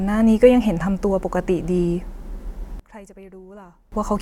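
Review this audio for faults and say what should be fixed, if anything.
Between 2.80 and 3.92 s the speech drops by about 22 dB to a faint leftover, then snaps back. That's likely one channel inverted: with one side's polarity flipped, the centred voice cancels itself when the two channels get summed to mono. Checking polarity on each channel and listening in mono before export would catch this.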